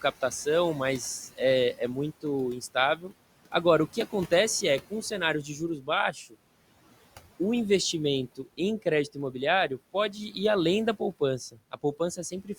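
A speech recording with noise suppressor artifacts throughout. The room noise sits about 20 dB below the voice, and the suppressor pulls it down by about 18 dB. It works band by band, frame by frame. So the background drops away in the gaps and swells back under the voice.

There is also speech cut by the noise suppressor. Between 1.28 and 6.35 s, parts of the voice dip by up to about 17 dB, adding up to roughly three quarters of a second. Shorter losses follow from 8.36 to 10.36 s, up to about 13 dB, and from 11.0 to 12.49 s, up to about 14 dB. Each of these two totals only a brief moment. The suppressor mistakes parts of the speech for noise. It lowers them along with the background, so they sound swallowed and faint.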